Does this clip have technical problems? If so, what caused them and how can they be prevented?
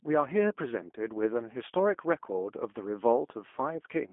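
Yes. The whole clip carries plainly audible G.729 codec damage: the speech sits in a narrow line band of about 250 Hz to 3.4 kHz and sounds rough and slightly synthetic, which fits an 8 kbit/s G.729A VoIP path rebuilding the speech from a filter, a pitch predictor and a few pulses per frame. To prevent it, record locally or use a wideband codec such as Opus at a higher bitrate.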